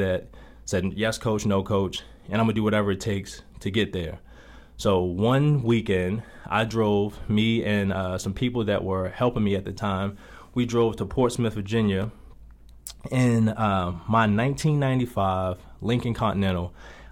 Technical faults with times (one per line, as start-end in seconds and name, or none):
12.02 chunks out of order